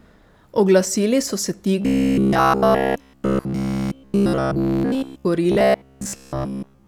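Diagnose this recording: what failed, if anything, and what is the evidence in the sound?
Robotic sound from repeated short buffers runs from 1.82 to 5.26 s, starting just after "so se", and returns from 5.52 to 6.87 s. Throughout, the speech turns into a rigid metallic buzz locked at 66.7 Hz, which fits a loop about 15 ms long. The likely cause is at the driver or buffer stage. Audio arrived too seldom, so the last short block was replayed in place of the skipped audio, continuously in the first stretch and for most of the second.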